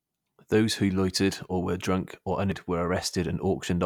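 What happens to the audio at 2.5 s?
At 2.52 s there is damaged data in the compressed stream. The decoder misreads the corrupted frame and loses sync. It is heard as a brief chirp, squawk, click or short hole.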